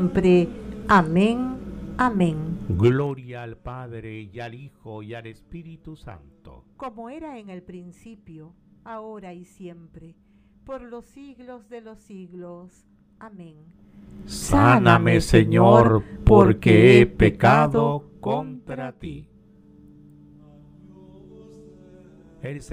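From 2.74 to 3.25 s, zipper noise rides on a drop of roughly 20 dB, applied in 2 dB steps at around twenty per second with no smoothing. Each step clicks audibly, giving a ticking zip. On a waveform the envelope descends in visible stairs, and a spectrogram shows faint broadband vertical lines at each step.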